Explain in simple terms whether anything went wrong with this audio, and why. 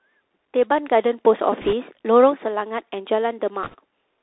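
Yes, two things went wrong. The whole recording passed through a Bluetooth CVSD headset codec, the narrowband format headsets use for calls. It keeps only the band from about 250 Hz to 3.7 kHz, so the speech sounds thin and boxy, like a phone line. Because it encodes the sound as tiny up-or-down steps, loud sharp sounds can't be followed fast enough: s sounds come out scratchy, and a fine grainy hiss sits underneath.

Then, twice, the wireless link dropped bits: bit errors on a Bluetooth voice link, from 1.61 to 1.74 s and again from 3.64 to 3.75 s. In those brief stretches, roughly a few percent of the data got flipped, so a rushing, crackly noise washes over the speech. Unlike a digital dropout or glitch, there are no loud pops or sudden silences, because each wrong bit nudges the sound only slightly and the error fades quickly.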